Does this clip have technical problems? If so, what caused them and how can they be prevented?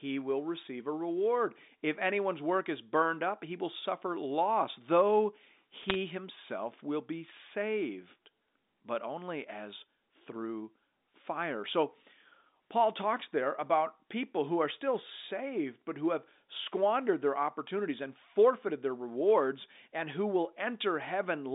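Yes, there's a short burst of bit errors on a digital phone line from about 5.83 to 5.95 s, right after "will suffer loss though" and before "himself will be saved". It sounds like a cluster of sharp ticks and crackle sitting on top of speech that's otherwise unchanged underneath, and that pattern fits bits being flipped on the G.711 A-law line at a rate of roughly a fifth of a percent. Each flip corrupts a single sample, and the hits landing on sign or high-order bits make the loudest clicks. The narrow 200 Hz to 3.7 kHz telephone band is just the codec behaving as usual, not part of the damage. To prevent it, carry the call over a clean digital path with error detection or correction, or fix the noisy line or faulty interface that's corrupting the bitstream.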